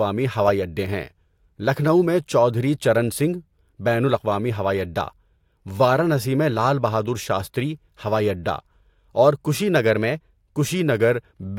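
At 9.75 s the speech abruptly runs about 5.5% fast and rises roughly 93 cents, close to a semitone, then snaps back to normal at 10.45 s. This is a drift correction step, likely clock-matching software briefly raising the playback rate to rebalance its buffer. On a spectrogram the harmonic bands jump upward together for that 0.7 s stretch and drop back at its end; the waveform's periods look slightly compressed throughout it.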